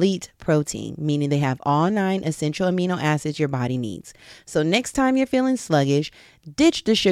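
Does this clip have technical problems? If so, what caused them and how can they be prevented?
Yes. Two short ticks come from a block of digital silence at 4.94 s, just before "you're feeling," and at 6.08 s, right after "you're feeling." The sound drops abruptly to silence for about 7.7 ms and 5.8 ms, the second matching a 256-sample buffer the program likely didn't fill in time. Give the audio thread more buffer headroom or priority so every block is delivered before playback needs it.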